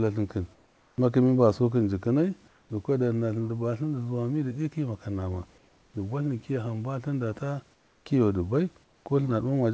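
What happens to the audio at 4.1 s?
Nothing goes wrong at 4.1 s: the speech passes through intact, with only the low room noise and the band limit of the G.722 call path, which leaves nothing above 8 kHz.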